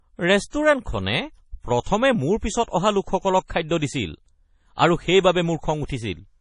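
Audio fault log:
throughout, MP3 compression: Nothing is present above 10.5 kHz, and the remaining sound is heavily damaged, with watery, swirling texture as weak frequency components drop in and out between frames. This is likely a lossy MP3 encode whose damage fits a bitrate near 32 kbps.
0.50–0.53 s, pre-echo: A short hiss precedes a sharp attack by about 33 ms, and the onset itself sounds softened. The codec spread its quantisation noise across the whole transform block, so noise sized for the loud attack also filled the quiet moment before it.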